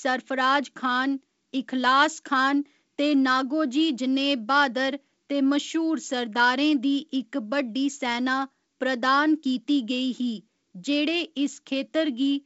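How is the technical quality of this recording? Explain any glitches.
No glitches can be heard in this recording.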